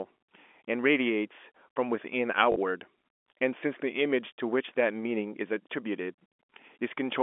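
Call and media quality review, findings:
Packet loss with last packet repeated, 2.52–2.56 s: brief robotic stutter, 40 ms of replayed audio, which fits two lost 20 ms packets filled by receiver concealment. Unlike a dropout, the gap holds repeated sound, not silence.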